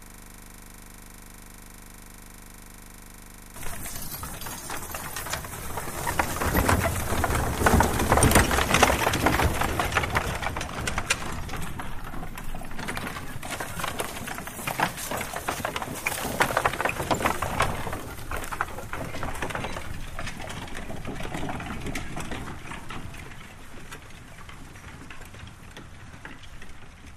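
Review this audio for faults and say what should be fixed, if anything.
System hang loop, already under way at 0.0 s until 3.56 s: one 40 ms slice repeats exactly, giving a 25 Hz buzz rather than mains hum or stutter. Prevent it by having the driver stop or mute output when the system stalls, instead of replaying the buffer.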